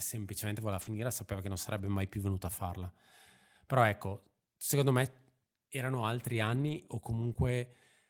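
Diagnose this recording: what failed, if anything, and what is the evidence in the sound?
Rough, grainy patches with no gaps at 0.81–0.99 s (after "semplicemente voleva", before "sapeva che non"), 1.77–1.79 s (after "sapeva che non"), 6.21–6.79 s and 7.21–7.31 s. This is lost packets rebuilt from error correction at the network stage. The decoder played low-bitrate backup copies carried in following packets, so the speech continues but coarser.

A brief smear or wobble at 7.33–7.37 s is short concealed packet loss, also a network fault. About 20 ms of audio arrived too late, and the decoder bridged it by extending the preceding sound before blending back into the real signal.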